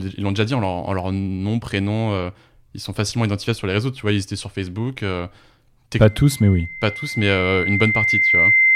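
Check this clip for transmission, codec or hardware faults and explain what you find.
One hardware fault is present: loudspeaker feedback squeal from 6.07 s to the end of the speech clip. A microphone is picking up its own loudspeaker, and at 2.1 kHz the loop gain passes one, so that tone feeds on itself. It swells over roughly two seconds to about 5 dB above the speech. On a spectrogram it is a single bright horizontal line at 2.1 kHz, and the waveform envelope balloons steadily.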